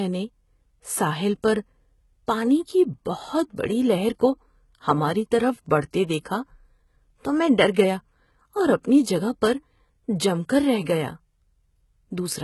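Throughout the speech, the treble sounds bright yet synthetic: s sounds come out gritty and metallic, and nothing reaches above 11.8 kHz. This is likely heavy HE-AAC compression, at a rate that fits roughly 16 kbps, where the upper band is rebuilt from copied lower bands rather than coded. That is why the top end is present but misaligned, not simply dulled as with a plain low-pass cut.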